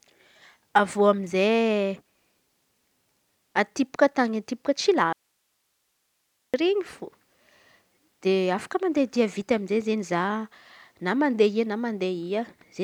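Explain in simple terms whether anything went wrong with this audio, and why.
The signal feeding the recording was likely cut off for a moment while the rest of the chain kept running, causing an audio dropout to a faint residue. From 5.13 to 6.54 seconds, the speech stops abruptly and only a faint hiss remains for about 1.4 seconds.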